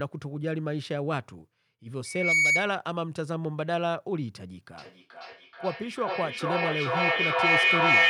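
From 2.05 to 2.74 s a loudspeaker feedback squeal swells over roughly a third of a second into a steady 2.2 kHz tone, about 10 dB above the speech. It is a single sustained pitch rather than repeated speech.

From 4.78 s to the end, a feedback echo between two devices returns the speech roughly every 400 ms. The repeats grow thinner and more ringing and pile up to about 7 dB above the speech. Unlike the squeal, it repeats the speech itself rather than one tone.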